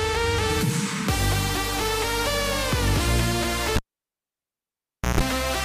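Cable pulled and plugged in from 3.76 to 5.21 s: a pop, 1.4 s of near silence, 0.15 s of 60 Hz mains buzz, then a second pop. The buzz sets it apart from a plain dropout.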